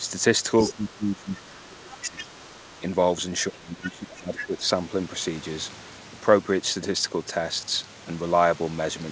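A speech recording with two recurring echo-canceller faults. Speech suppressed in double talk occurs at 0.00 to 0.05 s, 0.72 to 2.31 s and 3.50 to 4.64 s. The talker's level dips, by up to about 20 dB in the longer stretches. Both sides are talking at once, and the canceller is likely turning everything down because it cannot separate the near voice from the loudspeaker echo. The other side's voice leaking through is heard at 0.61 to 0.73 s, 1.91 to 2.80 s and 4.38 to 4.45 s. It sits roughly 10 to 15 dB below the talker. This is likely residual loudspeaker sound that the canceller failed to remove from the microphone. Nothing is heard above 8 kHz, which fits a wideband call codec on the path.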